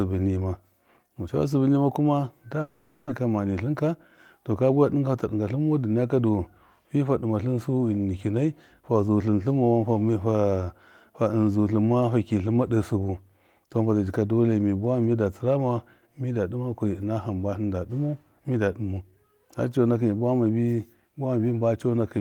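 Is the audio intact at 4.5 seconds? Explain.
No. A jitter buffer speed-up runs from 4.38 to 4.85 s: the receiver had built up excess delay and trimmed short pitch-period slices, about 50 ms in all, so the speech plays at roughly 109% speed with unchanged pitch and sounds briefly hurried.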